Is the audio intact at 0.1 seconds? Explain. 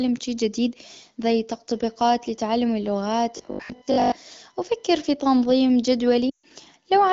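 Yes, the speech at 0.1 s is intact, with no fault at that moment.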